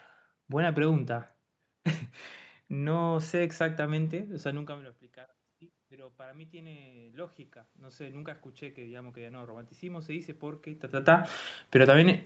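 From 5.76 s to 11.36 s, automatic gain rising: after the speech drops by about 20 dB as the talker moves back, the gain control slowly lifts its gain by about 12 dB, so voice and room noise swell together. On a waveform, the envelope and noise floor climb as a smooth ramp.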